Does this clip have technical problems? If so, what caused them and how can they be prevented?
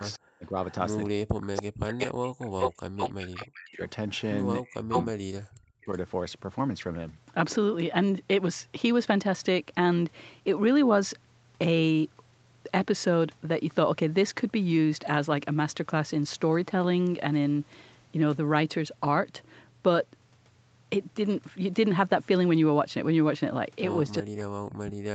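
Yes. An echo leak runs from 0.0 to 5.97 s: a delayed copy of the speech, trailing by 361 ms and only a few dB quieter, comes back, likely because the far end's echo canceller let its loudspeaker pickup through. Using a headset or better-tuned echo cancellation would prevent this.

Speech suppressed in double talk occurs from 0.17 to 5.92 s and again from 24.21 s to the end: the speech is turned down, dropping by as much as roughly 40 dB, for about four seconds in total in the first span. This is likely the echo canceller turning down both its own talker and the loudspeaker echo during overlapping talk. Better double-talk detection or less overlap would prevent it.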